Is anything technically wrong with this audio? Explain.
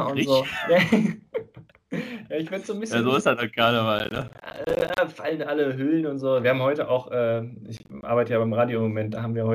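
Yes. Processor overload crackle appears from 3.99 to 4.98 s and from 7.77 to 8.03 s. Dozens of roughly 10 ms buffers miss their deadlines and drop to silence, producing gritty crackle. The waveform shows rapid hard-edged gaps, and the spectrogram shows dense vertical broadband streaks.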